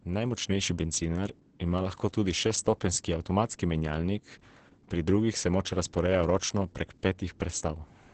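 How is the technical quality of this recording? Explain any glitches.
The speech is heavily degraded by Opus voice compression throughout: it sounds muffled, hoarse and faintly robotic, with nothing above 8.6 kHz. The SILK coder has cut the audio to wideband and coded the excitation coarsely, which fits a bitrate of about 10 kbps.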